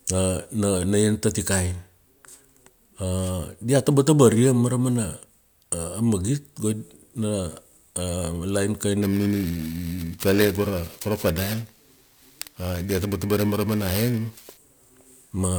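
A speech recording with periodic clock jitter from 9.02 s to 14.57 s, where the voice takes on a rough, metallic edge. The converter's sample clock is being wobbled at a fixed rate of around 2 kHz, so each component of the voice gains sidebands spaced that far above and below it. Unlike random jitter, which adds a diffuse hiss, this produces tonal roughness that follows the voice and disappears in the pauses.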